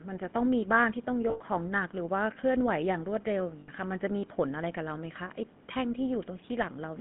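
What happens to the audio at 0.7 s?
At 0.7 s the speech sounds buzzy and gravelly, confined to roughly 150 Hz to 3.5 kHz, and this runs through the whole clip. It is GSM full-rate codec damage, consistent with 13 kbps: the vocal tract is modelled and driven by sparse regular pulses.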